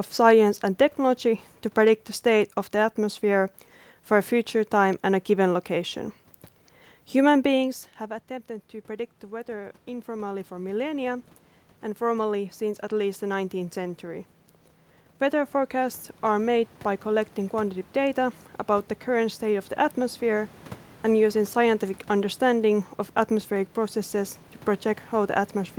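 Automatic gain rising in the capture chain: after the talker moved away around 7.5 s and the level at the microphone fell by about 15 dB, the gain control slowly added about 12 dB between 9.28 and 20.55 s, so the speech and room noise swell up together.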